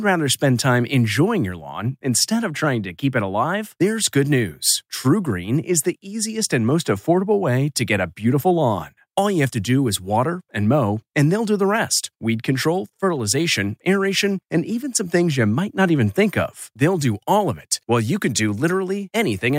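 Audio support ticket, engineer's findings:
Speech signal checked end to end with no technical faults found; level, continuity and channel behaviour show nothing requiring action.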